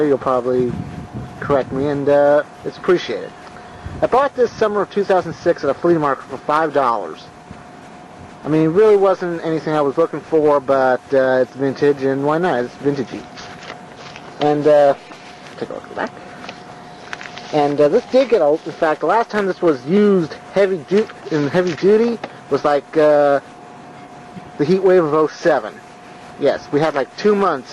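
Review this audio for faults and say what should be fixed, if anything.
Nothing here needs fixing; no faults can be heard.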